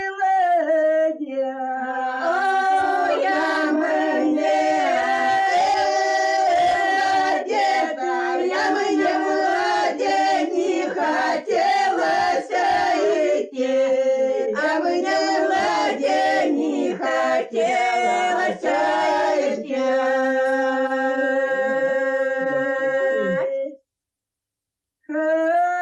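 No technical faults can be heard in this audio.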